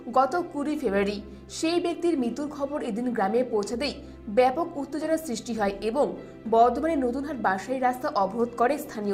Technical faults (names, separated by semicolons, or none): none